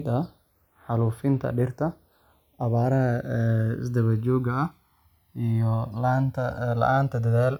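Speech, and the two channels are drifting apart the whole way through. They seem to come off separately clocked devices running a few hundred ppm apart, so the offset creeps up to around a millisecond and a half. Summed to mono, that slides comb notches slowly across the spectrum, giving a slow flanging sweep.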